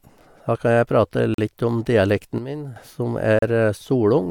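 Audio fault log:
1.34–1.39 s and 3.39–3.43 s, gap between stream segments: hard-edged silences of about 40 ms and 34 ms, two seconds apart at segment boundaries. The sound resumes exactly where it stopped, so nothing is lost, unlike a dropout.
2.38–2.76 s, sudden gain jump: speech and background noise drop together by about 9 dB instantly, then snap back. There is no ramp, so it is not a fade. This is likely an unramped gain setting being applied.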